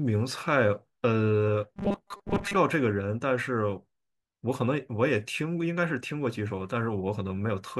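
A speech clip, with robotic sound from repeated short buffers between 1.73 and 2.57 s. Across that span the voice collapses into a rigid, metallic buzz fixed at 200 Hz that only loosely tracks the speech. The likely cause is an audio stream starved of fresh data, so the playback side keeps looping a tiny fragment, about 5 ms long to match the 200 Hz buzz, while roughly half of the real audio in that stretch is dropped.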